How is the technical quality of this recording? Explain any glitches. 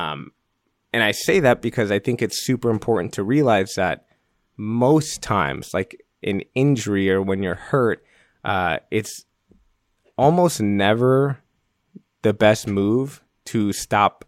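Nothing here stands out as a glitch; the recording holds together without any dropouts, clicks or other hiccups to point to.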